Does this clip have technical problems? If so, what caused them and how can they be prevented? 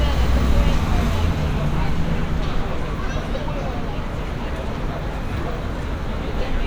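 No, these sounds come through without any audible technical problem, so there is nothing here that needs preventing.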